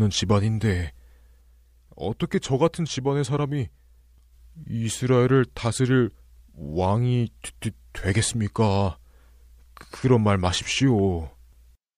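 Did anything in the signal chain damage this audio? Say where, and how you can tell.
No, nothing along the chain can be heard damaging this speech at any stage.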